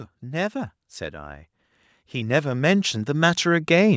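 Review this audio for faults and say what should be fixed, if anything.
Automatic gain rising runs from 0.2 s to 3.95 s. The gain control judged the input too quiet and kept raising its gain, about 14 dB across that span, so the speech and the background noise swell together. On a waveform the envelope widens steadily left to right, including the gaps between speech. On a spectrogram the whole band, which ends at 8 kHz as the call microphone processing shapes it, brightens gradually. To prevent it, set a proper input level before recording and cap the gain control's maximum gain and ramp rate.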